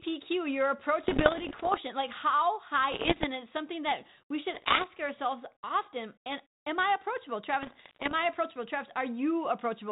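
Bit errors on an ADPCM link hit this speech at 1.04 to 1.79 s, 2.92 to 3.27 s, 4.54 to 4.88 s and 7.62 to 8.12 s. Flipped bits, roughly one or two in a hundred, throw the decoder's prediction and step size off. Each burst crackles and pops with brief level jumps.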